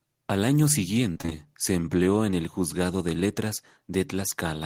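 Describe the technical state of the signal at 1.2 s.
Repeated packet loss (robotic sound) covers 1.13 to 1.33 s, just before "se empleó en el". Five gaps, up to 24 ms each, are filled by stretching the previous sound across half the span, so it sounds choppy. A spectrogram shows frozen, smeared slices, and the waveform shows repeated cycles.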